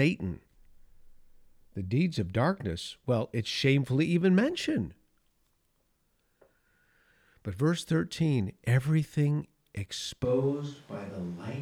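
At 10.25 s the speech abruptly turns roomy and hollow, losing low end, dropping around 5 dB and carrying more background noise, roughly 30 dB below the speech, through to the end. This points to a switch to a distant microphone, likely after the close microphone's signal dropped out.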